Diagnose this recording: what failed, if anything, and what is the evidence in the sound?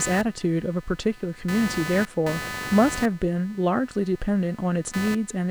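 Computer activity noise enters at the analogue wiring stage and persists throughout: a chirping buzz pulsing at around 300 Hz, roughly 15 dB below the speech and unrelated to its rhythm. Load currents from the computer's processor or peripherals are modulating the audio circuit's shared ground.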